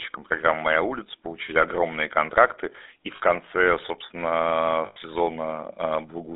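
A buzzy, gravelly roughness runs through the whole recording, and the sound is boxed into a band of roughly 300 Hz to 3.7 kHz. That is the GSM full-rate codec at work: it rebuilds speech from a vocal-tract model fed by coarse, regularly spaced pulses, which fits a 13 kbps stream.

At 3.16 to 3.21 s, between "огромные контракты и в" and "конце собственно", a brief metallic ring holds the sound for 40 ms, which fits two lost GSM frames. A longer 100 ms rough, metallic ring follows at 4.86 to 4.97 s, after "и в конце собственно". In both places the decoder repeated the last good frame.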